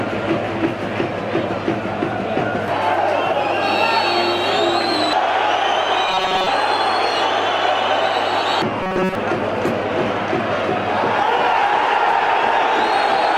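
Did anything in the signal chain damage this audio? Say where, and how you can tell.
Yes. A rigid 188 Hz metallic buzz at 6.09–6.47 s and 8.83–9.15 s is robotic sound from repeated short buffers, likely a starved driver buffer looping chunks of about 5 ms.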